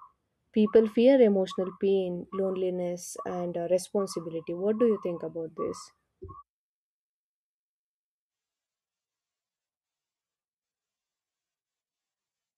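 Nothing in this speech recording jumps out as a technical problem; it runs along without a hitch for its whole length.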